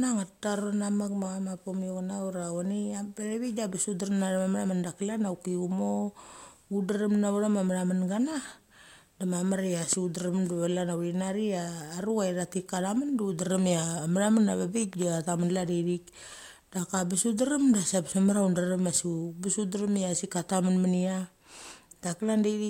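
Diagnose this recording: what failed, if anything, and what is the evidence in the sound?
Loud pops, likely analogue voltage transients: a spike about 10 dB above speech at 9.93–9.95 s, a double at 14.93–15.04 s, both vertical spectrogram lines.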